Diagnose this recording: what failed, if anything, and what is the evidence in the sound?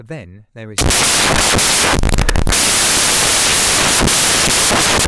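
Samples built from the wrong bytes, from 0.78 s to the end of the clip. The failure sits at the sample-format conversion stage. The speech gives way abruptly to loud, harsh broadband noise that persists to the end. The reader is assembling each sample from misaligned or swapped bytes, so the rapidly changing low-order bits land in the high-order position and dominate every value.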